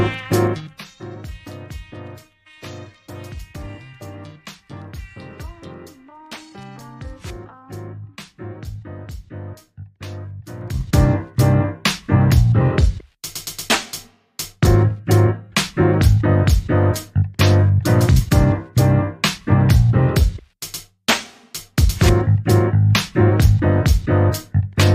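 Zipper noise at 0.44 to 0.84 s and again at 10.58 to 10.98 s: the level drops by around 20 dB, then later rises by a similar amount, in unsmoothed 3 dB jumps at about fifteen a second. Each jump clicks, giving a brief ticking rasp over the fade.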